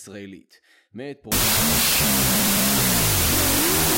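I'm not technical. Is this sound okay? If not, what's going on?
No. There is a wrong sample width from 1.32 s to the end: audio saved as 32-bit float is read as 16-bit, so the speech becomes loud noise, playing at half speed and lower pitch.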